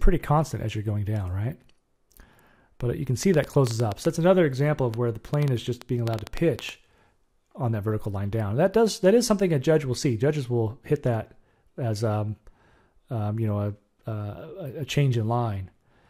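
From 3.23 to 6.7 s, a train of clicks ticks over the sound. About twenty pops arrive, roughly five or six per second, at an uneven pace. They stand well above the sound. Interference from nearby equipment or a faulty connection is the likely cause.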